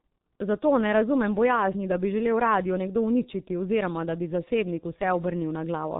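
Throughout the clip the speech sounds muffled and hoarse, with smeared consonants and nothing audible above about 3.8 kHz. This is heavy G.723.1 codec damage: its slowly updated voice model and very low bitrate, which fits roughly 6 kbit/s, blur detail and strip the upper band.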